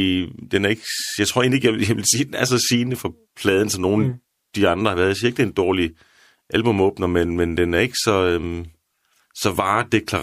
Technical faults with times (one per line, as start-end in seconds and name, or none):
none